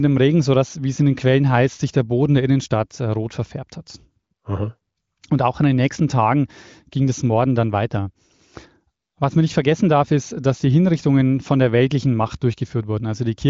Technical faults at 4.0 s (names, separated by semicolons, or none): none